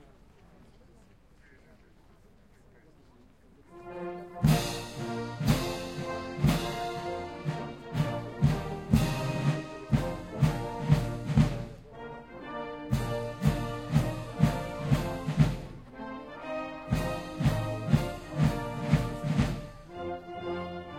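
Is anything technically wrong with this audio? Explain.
No, nothing in this recording of sounds stood out as technically wrong on listening.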